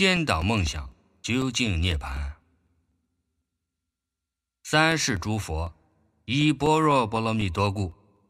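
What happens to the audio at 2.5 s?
At 2.5 s the sound sits inside a run of periodic USB or driver dropouts, 0.17 to 8.17 s. Every 0.25 s, about 2 ms drops to silence, giving regular ticks.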